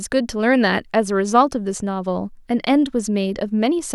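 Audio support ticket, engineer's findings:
No audible faults found.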